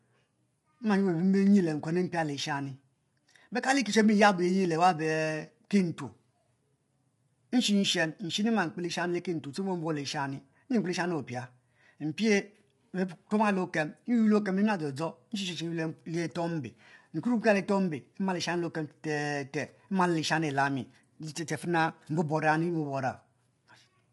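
Throughout, the speech sounds rough and grainy with nothing above 11.6 kHz, likely low-delay AAC compression whose short frames smear harmonics, fitting around 32 kbps.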